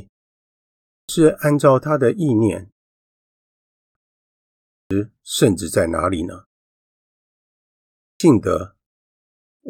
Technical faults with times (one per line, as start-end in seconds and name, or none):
0.70-1.09 clipped start after a pause
3.56-3.95 clipped start after a pause
4.54-4.91 clipped start after a pause
7.81-8.20 clipped start after a pause